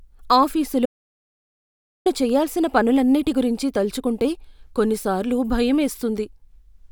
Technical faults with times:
0.86-2.06 audio dropout to silence

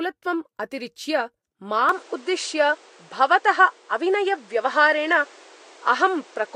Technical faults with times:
1.89-6.55 input switched to a poorer device

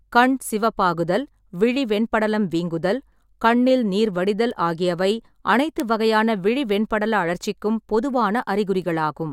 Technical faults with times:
4.51 bit error spike
5.80 bit error spike
8.82 bit error spike

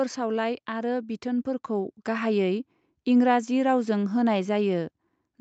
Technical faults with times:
0.66-2.39 automatic gain rising

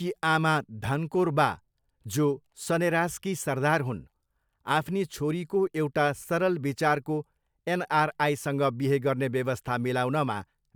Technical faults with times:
none

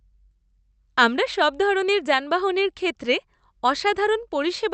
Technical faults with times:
none

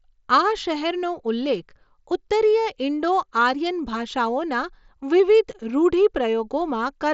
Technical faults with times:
none

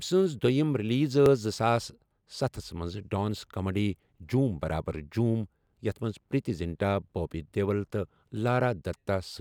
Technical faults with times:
1.26-7.87 clock drift buffer slips

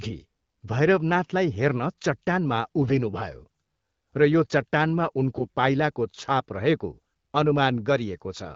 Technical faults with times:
2.82-2.99 AMR bit errors
5.35-5.48 AMR bit errors

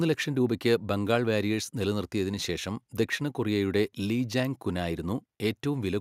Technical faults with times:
none

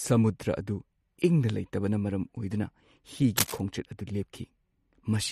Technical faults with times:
0.00-5.31 MP3 compression
3.37-3.61 cable scratch noise

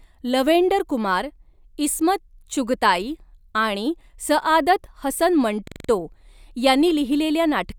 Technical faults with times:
5.67-5.89 system hang loop

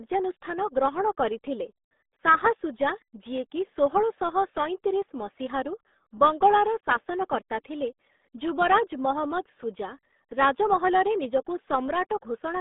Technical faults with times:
0.00-12.60 RealAudio 14.4 codec

